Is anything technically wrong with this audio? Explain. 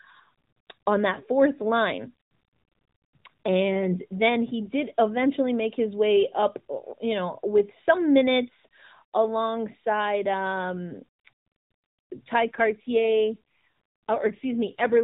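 Yes. There is an AMR rate drop from 12.44 s to the end of the clip. The speech is band-limited to 4 kHz throughout, as on a narrowband mobile call. At 12.44 s it turns rougher and more synthetic, with a buzzy edge. The bandwidth does not change and nothing drops out. This fits the codec switching from 12.2 to 5.9 kbps on a weak link, spending fewer bits on the voice and more on error protection. The rate never recovers before the clip ends.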